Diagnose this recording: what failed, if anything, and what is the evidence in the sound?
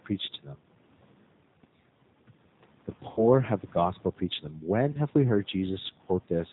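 The codec stage is at fault throughout. The speech is band-limited with nothing above 4 kHz, and it sounds rough and faintly synthetic, with room noise about 24 dB down warbling. That points to G.729 at 8 kbit/s, whose pulse-coded excitation distorts the sound, unlike plain filtering, which would only dull it.

VoIP packet loss concealed by the speech codec is a network fault, heard from 3.11 to 3.25 s before "have the gospel preached" and from 4.92 to 4.99 s before "we heard". Each gap is filled with a fading extrapolation, a buzzy tone or coloured noise, rather than silence or a click, and weakness lingers afterwards as the decoder recovers. The longer gap fits about three lost 20 ms packets, the shorter one packet.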